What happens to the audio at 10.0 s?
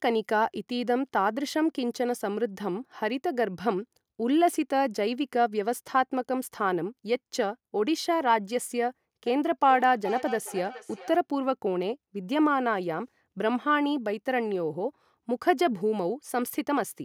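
At 10.0 s the speech is caught in a feedback echo between two devices, from 9.26 to 11.23 s. A second device in the room replays the call, the original microphone picks that up again, and the speech returns roughly every 0.4 s, thinner and ringing, peaking about 12 dB below the speech.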